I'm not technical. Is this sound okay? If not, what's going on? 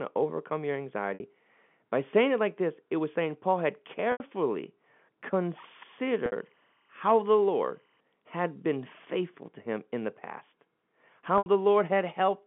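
No. Two kinds of fault can be heard in this speech.

Packet loss with pitch repetition occurs at 1.14, 4.12, 6.26 and 11.38 seconds, each time lasting 60 to 80 milliseconds. A few pieces of the stream never arrived, so the receiver covered each gap by replaying the last tiny slice of voice over and over while fading it out. You hear a brief held, buzzy moment before the speech picks up again.

Timecode bleed runs from 5.66 to 8.0 seconds. A timing signal used to keep recording equipment in sync leaked into the audio from a nearby track or cable. It flips between two pitches, around 1 kHz and 2 kHz, and ticks along at 25 steps a second. You hear it as a faint, steady chirping warble behind the voice, which stays in the narrow sound of an ordinary phone line.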